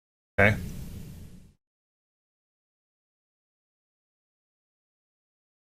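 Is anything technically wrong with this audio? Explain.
No, nothing technically wrong can be heard here.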